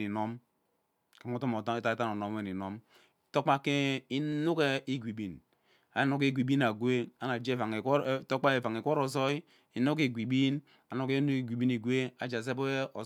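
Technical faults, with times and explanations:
0.59–13.01 s, clock drift buffer slips: about ten clicks land at a steady 1.24 s spacing across the speech, each a brief tick where the waveform jumps. The likely cause is two devices running on separate clocks that disagree by roughly 150 ppm, so the buffer between them creeps until a handful of samples is dropped or repeated. That abrupt splice makes each click, and the constant clock mismatch keeps them evenly spaced.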